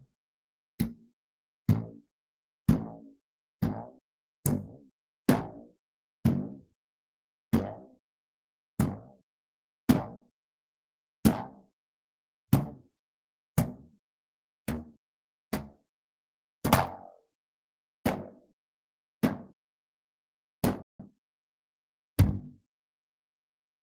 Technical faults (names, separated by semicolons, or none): burst of packet loss; playback stall; time-compressed catch-up